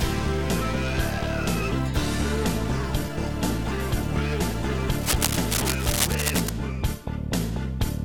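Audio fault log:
5.01–6.49 s, cable scratch noise: for about one and a half seconds a dense, uneven scratching and rustling sits over the sound, only a few decibels below it, most likely from a worn cable, connector or control being moved so its contact resistance jumps about rapidly. On a spectrogram it shows as ragged broadband smears filling the band in irregular vertical streaks. The waveform carries jagged, spiky bursts riding on top of the signal.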